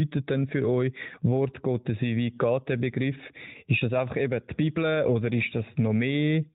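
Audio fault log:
No faults are present; the speech comes through the AMR narrowband mobile codec with content limited to below 4 kHz and only light coding character, which fits the 12.2 kbps mode.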